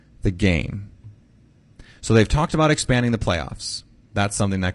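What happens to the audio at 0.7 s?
The speech at 0.7 s carries low-delay AAC compression damage, which runs through the whole clip rather than starting there. The voice sounds rough and grainy, most likely from AAC-ELD coding at a rate that fits about 32 kbps. At so low a bitrate its coarse quantization leaves noise in the gaps between the pitch harmonics. On a spectrogram the harmonic stripes look smeared, with speckled energy between them and a thin, patchy top band. The waveform shows no obvious change.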